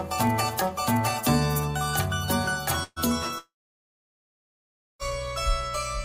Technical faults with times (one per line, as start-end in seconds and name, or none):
2.83-2.99 burst of packet loss
3.38-5.02 long network dropout